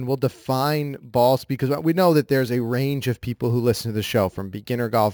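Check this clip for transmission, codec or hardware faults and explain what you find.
One fault runs through the whole clip: imaging from sample-and-hold upsampling. The speech appears to have been raised from a 16 kHz rate to 44.1 kHz by simply repeating each sample, with no smoothing filter to remove the mirrored copies of the spectrum. The lowest copy sits between 8 and 16 kHz at about 22 dB below the speech. It is heard as a bright, metallic fizz that rises and falls with the speech and moves opposite to its pitch.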